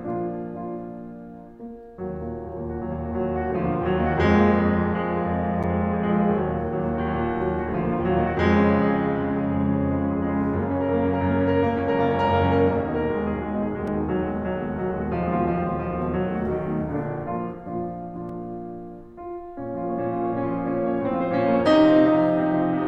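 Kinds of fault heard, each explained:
Block of digital silence: stretches of samples are replaced by zeros with no fade, about 8.7 ms at 5.63 s and 2.9 ms at 13.87 and 18.29 s (fitting a 128-sample buffer), heard as ticks. Waveforms show flat gaps, spectrograms thin broadband vertical lines.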